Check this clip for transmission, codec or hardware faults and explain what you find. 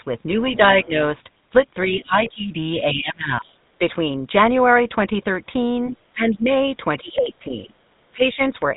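The speech carries three faults: GSM full-rate coding throughout, several stretches of speech suppressed in double talk, and two brief moments of the other side's voice leaking through.

GSM full-rate codec runs the whole clip. Nothing is passed above 3.8 kHz, and the voice has a buzzy, gravelly roughness, which fits the 13 kbps full-rate coder. It builds the voice from a vocal-tract model driven by a coarse, regularly spaced pulse excitation. A plain narrowband telephone channel would sound just as dull but stay clean, so the grain, not only the band limit, identifies this coder.

Speech suppressed in double talk occurs at 1.88–3.81 s, 5.9–6.48 s, 7.0–7.75 s and 8.14–8.4 s. The level sags, dulls or drops out in pieces, deepest around 25 dB near 6 s. Across the first span about a second of the voice is affected, and the last dip is shallow, about 10 dB. The likely cause is an echo canceller turning everything down while both sides talked at once. 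Unlike a network dropout, the gaps follow the overlap.

The other side's voice leaking through appears at 2.01–2.31 s, about 20 dB below the speech, and at 5.9–6.01 s, about 30 dB below. Each is a faint second voice under the talker. It likely comes from loudspeaker sound the echo canceller failed to remove from the microphone. It coincides with the suppression dips, and a true delayed echo would instead repeat the talker's own voice.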